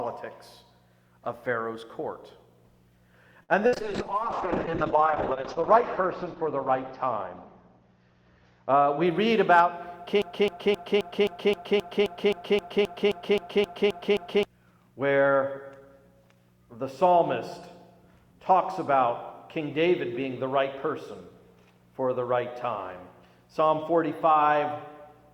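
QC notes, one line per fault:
3.43–3.52 s, short stall from a late packet: a packet turned up about 54 ms late and the jitter buffer ran dry, so the receiver held the last bit of sound until it arrived, then picked up right where it left off. Nothing goes missing here, you just get a sound hanging on a touch too long with a faint buzzy dip, and everything after sits about 54 ms later than before.
3.67–3.75 s, burst of packet loss: this time the packets never made it in time. The receiver papered over roughly 57 ms by continuing the last sound and fading it down, which gives that brief held buzz or hiss, and then the audio jumps ahead. About 60 ms of the original is simply gone, so there's a small skip just after the stall.
3.73–9.33 s, call bitrate drop: the bandwidth estimate collapsed and the encoder was throttled from 64 kbps down to 6 kbps, bottoming out for about 1.8 s. At that rate Opus codes coarsely and chops the top end, with the bandwidth falling from 20 kHz to 8 kHz. 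That's why this stretch sounds muffled and a bit watery and rough, until it opens back up around 9.3 s.
9.04–9.32 s, jitter buffer speed-up: with a backlog built up, the receiver trimmed short pitch-period chunks again and again, shaving roughly 40 ms off to bring the delay down. The result plays at about 111% speed without any pitch shift, so this quarter-second feels slightly hurried right as the bitrate recovers.
10.22–14.45 s, broken-record loop: a 263 ms fragment repeats 16 times back to back, identical each pass, for over four seconds. Whatever should have played in that window is lost. It sounds like a stalled player or stream endlessly resending the last chunk it held, and that's the likely cause.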